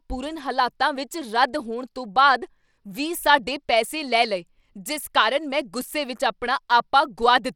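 A speech recording that has most likely passed through Bluetooth SBC compression at a small bit pool, with the damage plainly audible from start to finish. Starved of bits, the weak upper sub-bands drop in and out while the rest are quantised coarsely, which fits a link running at roughly 96 kbps. The result is flickering, unstable treble, a gritty grain and some aliasing riding on the speech, and nothing at all above 17.3 kHz.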